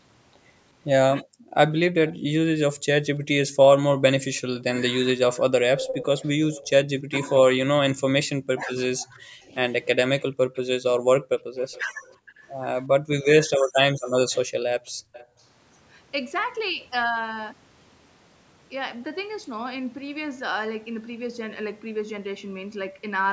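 A speech recording from a call. At 1.24 s the room background drops away, about 40 dB down, and comes back at 1.55 s. This is background gated by the echo canceller. While the far end played through the loudspeaker, the canceller pulled the microphone down hard, and the room tone went with it. The same gating returns from 11.84 to 15.4 s, dipping up to about 36 dB, for roughly a second in total. From 2.08 to 15.43 s a delayed copy of the speech trails the original by 350 ms. It sits around 10 dB below the main voice. This is an echo leak. Sound from a loudspeaker at one end reached its microphone and was sent back. The likely cause is an echo canceller that did not fully remove it. Between 2.72 and 14.57 s the talker's voice also dips and breaks up in pieces, by around 40 dB at worst and for about one and a half seconds altogether. This is speech suppressed in double talk. Both sides spoke at once, and the canceller likely could not tell the talker from the loudspeaker echo, so it turned both down. 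The call's microphone processing leaves nothing above 8 kHz, with the lowest bass trimmed as usual.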